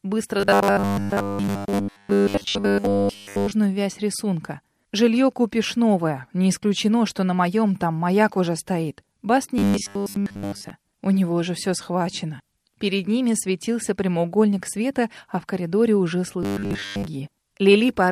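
Robotic sound from repeated short buffers hits at 0.40–3.52 s, 9.58–10.70 s and 16.43–17.06 s: a rigid 100 Hz buzz, likely from roughly 10 ms chunks looping, wholly in the first stretch, mostly in the later two.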